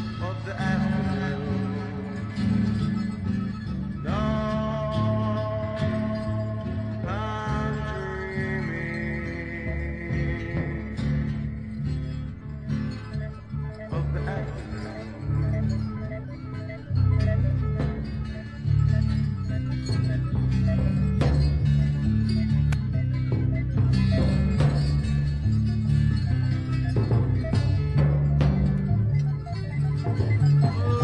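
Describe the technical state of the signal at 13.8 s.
At 13.8 s the signal is intact, with no audible fault at that moment.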